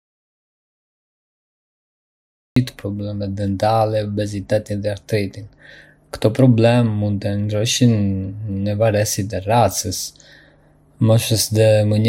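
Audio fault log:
0.00–2.56 s, audio dropout to silence. The clip opens already cut out, in silence with no room tone. Speech then arrives abruptly, mid-flow, at 2.56 s. The input was likely lost while the recorder kept writing silence, so that passage is gone.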